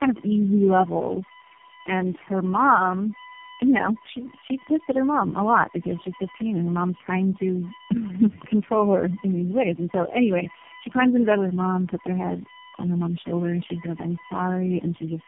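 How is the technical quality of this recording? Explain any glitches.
The quality is poor, with two faults present for the whole recording.

USB whine runs throughout. It is a steady tone at 1 kHz with harmonics, loudest at 7 kHz and only about 15 dB below the speech. The cause is USB's 1 ms frame timing leaking in through power or ground.

Tandem speech coding is also heard throughout. The speech sounds rough, muffled and warbly, with nothing above 3.6 kHz. That suggests three speech codecs in a row, each re-encoding the previous one's damage.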